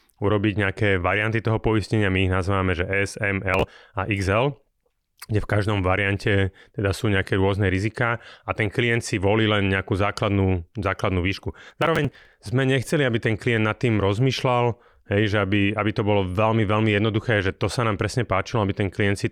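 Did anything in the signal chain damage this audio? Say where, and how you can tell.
Yes, there's processor overload crackle at the driver and buffer stage. You get a short gritty burst from 3.54 to 3.68 s and a longer tearing stretch from 11.68 to 12.46 s riding on the speech. The processor couldn't fill its buffers on time, which sound like roughly 10 ms each. The missed ones were simply skipped, so you hear a run of small hard-edged gaps: about ten in the first burst and several dozen in the second.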